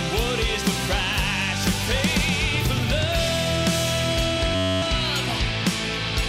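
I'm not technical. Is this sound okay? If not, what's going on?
No. From 4.56 to 4.82 s there is a system hang loop. The computer briefly froze, so one tiny slice of sound repeated, making a steady buzz.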